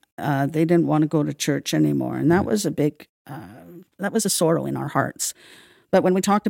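From 2.72 s, just after "that mm was a", the speech suddenly turns rushed at the same pitch: a time-stretched section, likely squeezed to 1.59 times speed.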